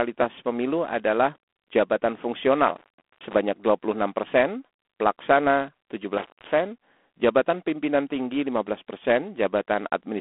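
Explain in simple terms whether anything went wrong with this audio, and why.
Two things went wrong. The whole recording went through G.726 ADPCM, a telephone coding method that stores each sample as a coarse guess of the change from the last one. Here it is set low enough to leave a rough, rasping hiss that rises and falls with the speech, and nothing above about 3.8 kHz survives, so it sounds thin.

There is also an intermittent contact, like a loose plug briefly losing connection. Just after "pemilu adalah jabatan", from 2.67 to 3.35 s, the sound crackles and drops out for about 0.4 s. It happens again from 6.18 to 6.53 s, with a gap of about 0.2 s.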